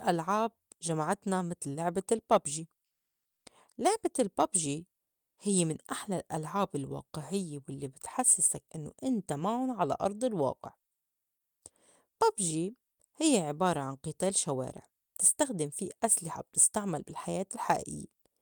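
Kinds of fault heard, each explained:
Comfort noise in place of the background: From 5.03 to 5.37 s, about 340 ms, the real background, which sits roughly 47 dB below the loud passages, drops out and is replaced by a flat, featureless hiss about 16 dB quieter. The likely cause is discontinuous transmission, such as Opus DTX, with synthetic noise filling the gap. On a spectrogram the textured background becomes a smooth, uniform wash. The waveform shows a sudden, even, lower noise floor.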